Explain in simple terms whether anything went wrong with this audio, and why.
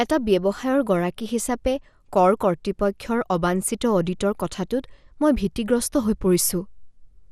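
The speech was likely squeezed too hard by MP2 compression, so upper frequency bands drop out throughout, leaving it dull, gurgling and grainy from start to finish.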